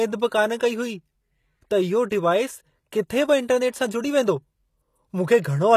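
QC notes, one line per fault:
Throughout, HE-AAC compression: the treble sounds bright but synthetic, and s sounds come out gritty and metallic. Nothing reaches above 14.9 kHz. The likely cause is spectral band replication, with copied lower bands standing in for real treble, which fits roughly 24 kbps.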